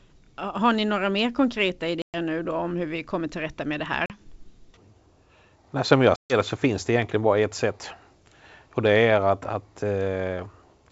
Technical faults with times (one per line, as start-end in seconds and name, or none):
2.02-2.17 packet loss on an ADPCM call
4.06-4.17 packet loss on an ADPCM call
6.16-6.34 packet loss on an ADPCM call